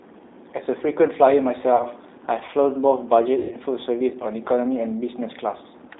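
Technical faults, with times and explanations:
Throughout, G.729 codec: the audio is confined to roughly 250 Hz to 3.7 kHz and rebuilt at 8 kbit/s from a vocal tract filter, pitch predictor and sparse pulses, so the speech is plainly rough, thin and slightly synthetic.
1.76–1.85 s and 3.39–3.54 s, VoIP packet loss concealed by the speech codec: about 40 ms, then 120 ms, went missing, fitting two and six 20 ms packets. The decoder stretched its last pitch and filter into a fading buzzy tone or coloured noise, leaving the speech weakened briefly afterwards.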